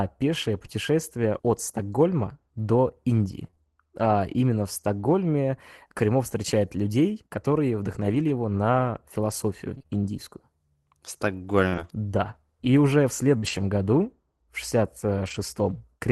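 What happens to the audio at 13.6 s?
At 13.6 s the audio is inside a stretch of scattered short gaps running from 8.02 to 15.36 s, just after "встречает людей которые". Packets went missing or arrived late in about five places, and the receiver filled each hole, the longest roughly 50 ms, by extending the previous sound. The result is brief ticks, smears and hiccups.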